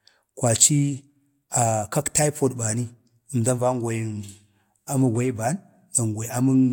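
No technical faults can be heard anywhere in this speech recording. Nothing in the audio breaks, drops out or changes in a way that would call for a fault description.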